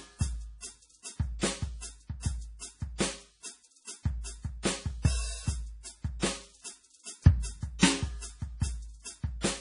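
Music, and MP3 compression is likely the cause of the damage heard across the whole clip. Nothing sounds above about 10.6 kHz, and the remaining detail is heavily degraded: weak spectral components flicker in and out between frames, giving a watery, swirling texture and smeared attacks, which fits a very low bitrate near 32 kbps. A plain low-pass filter would dull the top end just as cleanly but would leave no such frame-to-frame warbling.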